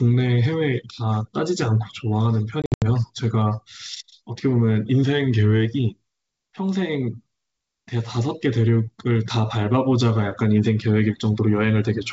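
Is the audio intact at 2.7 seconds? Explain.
No. From about 2.62 to 2.84 s the call suffers packet loss on an ADPCM call: roughly seven packets go missing, about 160 ms lost in total, scattered over 200 ms with the longest run 80 ms. The gaps are filled with silence, and the decoder's adaptive predictor and step size drift away from the sender's. The sound drops out in hard-edged holes, then resumes slightly distorted before settling.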